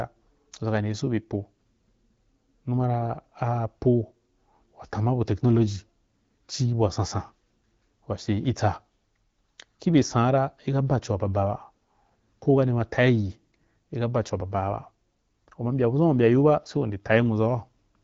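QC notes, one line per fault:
No faults found.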